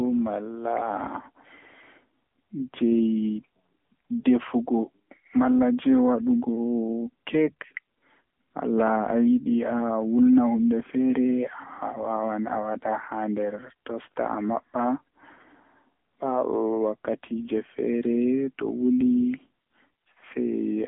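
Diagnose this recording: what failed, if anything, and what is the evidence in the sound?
The codec stage is at fault: the whole 21 seconds has gone through the AMR narrowband mobile codec. Nothing survives above about 3.8 kHz, the phone band sits at roughly 150 Hz to 3.4 kHz, and the speech sounds plainly buzzy and synthetic, which fits a low AMR-NB mode near 8 kbps.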